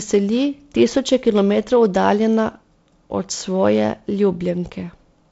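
Nothing stood out on listening to this speech recording.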